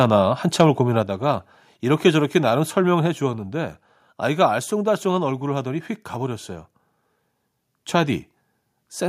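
Right at the start of the speech, from 0.01 to 0.05 s, there is a brief microphone overload. The opening peak is driven about 1 dB past the converter's ceiling, so the tops of the waveform are flattened across a small fraction of samples. The sound takes on a short, harsh, crackling edge. The likely cause is the microphone's input volume being set too high for the first loud burst.

Two microphone volume step-downs follow. At 1.02 s the level of both the speech and the background drops abruptly by about 4 dB. At 3.06 s there is a second, smaller drop of about 2 dB. Each change happens in a single step, not a gradual fade, so the loudness shifts audibly down at those instants. This likely comes from the call software reacting to the earlier overload by lowering the device's input volume.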